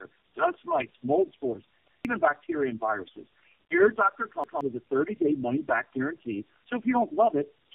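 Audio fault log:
throughout: channel delay (comb filtering). One channel lags the other by roughly 3 ms before the mono sum, so shared sound cancels at evenly spaced frequencies from around 150 Hz upward. The result is a hollow, phasey tone whose notches stay fixed, unlike a sweeping flanger or decaying room reverb.
throughout: tandem speech coding. The speech is rough, muffled and warbly, with nothing above 3.6 kHz. It sounds like several narrowband codecs in a row, such as G.729A and AMR-NB, each re-coding the previous coder's damage. The degradation is heavier than any single low-bitrate codec would produce.
1.88–2.05 s and 4.44–4.61 s: repeated buffer. After "dust mites mold spores" and before "with a", a segment of about 0.17 s plays twice with a hard join, which fits an 8192-sample buffer being replayed late. Roughly 0.15 s of new sound is lost each time. The gap is filled with a stutter rather than the silence of a dropout.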